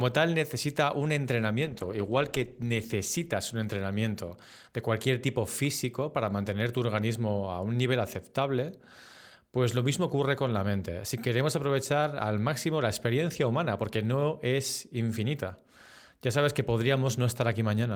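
Right after "tal necesita un", at 1.64 s, there's a call bitrate drop lasting until about 3.93 s. The encoder got starved of bits, and the speech turns rough and muffled, with the top end gone, for about 1.2 s at its worst. That fits a fall from roughly 40 to 17 kbps.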